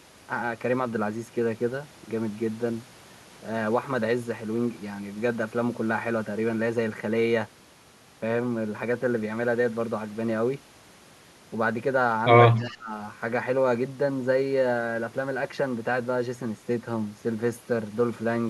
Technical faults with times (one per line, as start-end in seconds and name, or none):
12.56-12.77 echo leak
12.60-12.94 speech suppressed in double talk